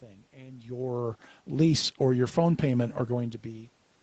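Nothing's actually wrong with this bit of speech: the level shifts near 0.5 s and again around 3 s are just the talker moving relative to the mic, the room's own background noise is part of the recording, and the top end stopping at about 8 kHz is simply what a call path running at that bandwidth gives you.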